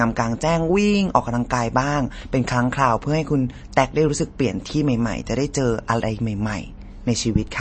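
This speech clip carries MP3 compression damage from start to finish. There is no content above about 8.4 kHz, a fixed treble ceiling set by the encoder. Weaker spectral detail flickers in and out between frames, which gives the speech a watery, swirling texture and makes s sounds chirp metallically. The degree of damage fits a low bitrate of around 32 kbps, and aggressive MP3 encoding is the likely cause. A plain low-pass filter would remove the treble just as cleanly, but it would not produce the swirl or the chirps.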